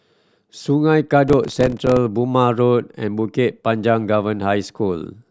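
From 1.28 to 1.97 s the speech carries processor overload crackle, a gritty tearing laid over the sound. Around thirty very short buffers, each about 2 ms, miss their deadline across that stretch, and each gap is filled with a hard-edged fragment of old audio.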